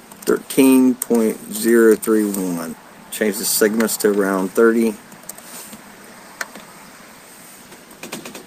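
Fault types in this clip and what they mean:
skip ahead: at about 2.73 s the audio jumps forward with no gap left behind. Something like 0.7 s of sound just isn't there, dropped while later audio was already queued, so both sides of the cut butt straight together and delay drops by roughly that much.
jitter buffer speed-up: from about 2.83 s to 4.81 s the receiver keeps snipping out short pitch-period chunks to drain a buffer that had got too full. Playback runs at about 109% speed with pitch unchanged, sounding hurried, and roughly 0.2 s gets trimmed overall.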